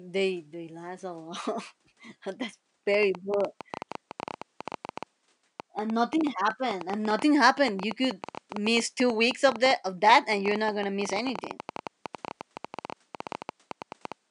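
From 2.94 s to 14.13 s the speech carries a train of clicks, about ten per second at an uneven pace, roughly a hundred in all. They tick through the pauses as well, and some pop well above the speech. Likely interference from nearby equipment or a faulty connection or power supply.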